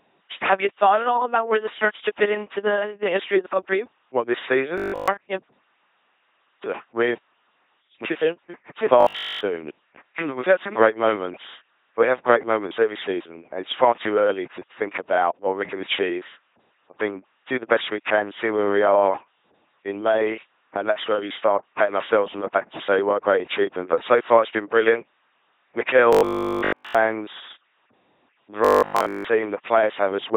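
LPC-10 vocoder damage runs throughout: the speech is rebuilt at 2.4 kbit/s from a simple pulse-or-noise excitation, giving a heavy buzzing robot voice.

Robotic sound from repeated short buffers appears at 4.78–5.08 s, 9.01–9.41 s, 26.13–26.95 s and 28.65–29.27 s. It is likely caused by late audio, with essentially every fragment replayed, producing a rigid 50 Hz buzz that fits a 20 ms buffer.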